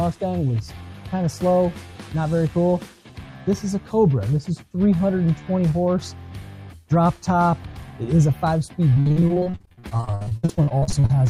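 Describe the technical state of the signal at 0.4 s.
At 0.4 s the signal is intact, with no dropout, distortion or other fault audible at that point.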